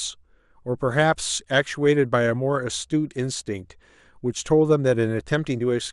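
Right from the start the speech has that dull, gurgly quality you get from MP2 compression, most likely a Layer II encode at a rate somewhere around 80 kbps. At that budget the encoder can't feed all 32 sub-bands, so the upper ones get switched off and flicker in and out, and whatever survives is quantised coarsely. That gives the top end a muffled feel with a granular edge running under the whole clip.

Then from 3.37 to 3.41 s there's a quick patch of DAB burbling, short blips of noise sitting over the speech. That's what you hear when reception errors slip past the error correction into the MP2 data. Corrupted samples put short blips of noise in single sub-bands, and corrupted scale factors make sub-bands jump in level for up to a frame. The length fits a couple of frames being hit, and the error rate behind it would only need to be a small fraction of a percent.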